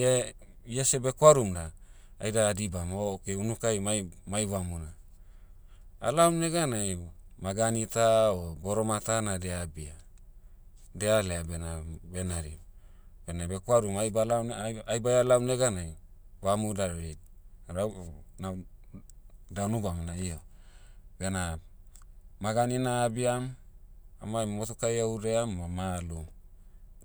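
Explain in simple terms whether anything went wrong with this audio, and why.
Nothing went wrong here: the speech signal stays steady and intact throughout, with nothing in the sound that points to a problem in how it was captured or played back.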